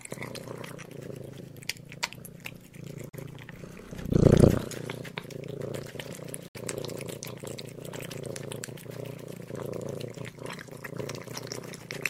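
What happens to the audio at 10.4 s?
Nothing goes wrong at 10.4 s; the audio there plays through intact, with no dropout, click, distortion or other fault.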